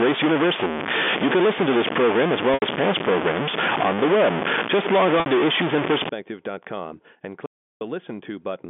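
From the start to 6.09 s, a distortion rides on the speech and fills the pauses with noise, most likely from a stuck bit corrupting about half the sample values. At 2.54 to 2.62 s and 5.20 to 5.26 s, gaps of 80 ms and 60 ms are bridged by packet loss with pitch repetition, so the last pitch period is repeated and fades into silence before the speech returns. From 7.46 to 7.81 s, an audio dropout to silence leaves 0.35 s of silence with no room tone, likely from a lost input.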